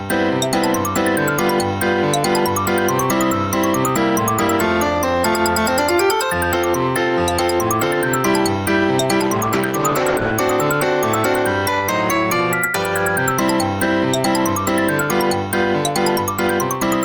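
At 9.21 s the sound turns rough and watery, with a duller top end, and it stays that way for about 1.1 s before clearing at 10.39 s. This is a call bitrate drop: the connection's bandwidth estimate fell, so the encoder coded the signal far more coarsely, consistent with a fall from around 32 kbps to roughly 13 kbps. On a spectrogram the upper frequencies abruptly thin out across that span, leaving a smeared, blotchy texture below, then fill back in once the bitrate recovers.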